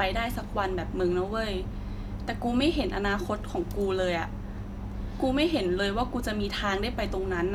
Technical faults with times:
none

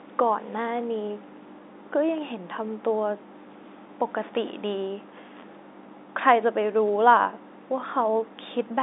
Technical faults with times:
none

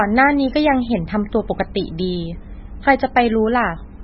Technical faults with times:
0.00-4.03 MP3 compression

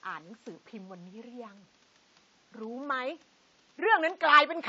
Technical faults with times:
0.00-4.68 AAC compression

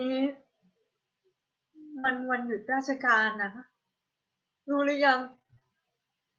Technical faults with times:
1.99-2.06 short concealed packet loss
2.04-2.10 lost packet rebuilt from error correction
3.42-3.44 lost packet rebuilt from error correction
5.20-5.68 repeated packet loss (robotic sound)

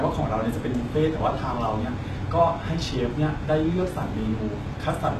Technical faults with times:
0.00-5.19 HE-AAC compression

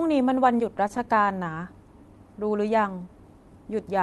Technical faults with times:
0.77-1.58 repeated stalls (stutter)

